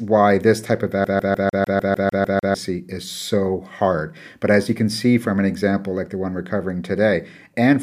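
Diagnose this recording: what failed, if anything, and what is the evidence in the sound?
Playback failed: the CD stuck on one turn, a scratch sending the laser back one track on each rotation. From 1.04 to 2.54 s the speech stutters, a 150 ms slice repeating 10 times with a brief mute at every jump, giving the fast, even skipping-CD rhythm.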